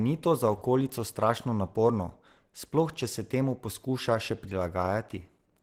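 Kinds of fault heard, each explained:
Opus compression: the speech was likely run through Opus at a low bitrate, the sound pointing to about 16 kbps in its hybrid speech mode, where too few bits per band leave the speech plainly muffled and hoarse throughout the clip.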